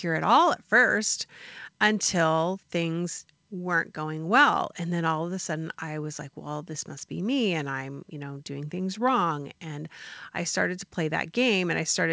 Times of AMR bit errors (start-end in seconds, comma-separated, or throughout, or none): none